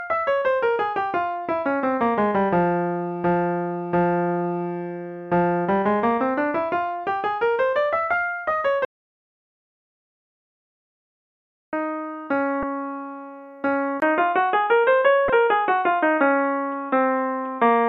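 At 8.85 s the input was likely lost while the recorder kept writing zeros, an audio dropout to silence: the sound stops dead for about 2.9 s, with no room tone, until 11.73 s. From 12.60 to 12.63 s, damaged data in the compressed stream throws the decoder off its frames, and it searches for the next frame header. At 14.00 s the input likely switched to a poorer device. After a 20 ms silence, the sound turns dull and boxy, with nothing above 3.8 kHz, a level shift of roughly 5 dB and a new, faint noise floor through to the end. From 15.27 to 15.30 s, more damaged compressed data makes the decoder lose sync again.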